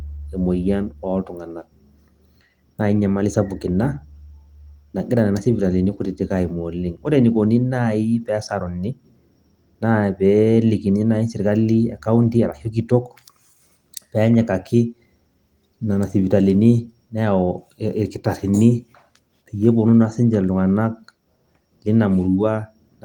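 Nothing stood out on listening to this speech clip, which carries the light, band-wide character of 24 kbps Opus voice compression running as it should.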